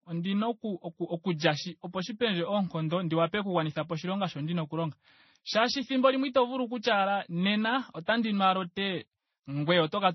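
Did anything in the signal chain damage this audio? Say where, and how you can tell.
Yes. The damage sits at the codec stage and runs through the whole speech clip. Nothing is heard above 5.9 kHz, so the top end is dull. Two kinds of coding artefact sound together. That points to transcoding between lossy codecs, likely a low-bitrate MP3 pass re-encoded to Vorbis. The second encoder spent its few bits on the first one's flaws and added its own, while the lowest cut-off remained.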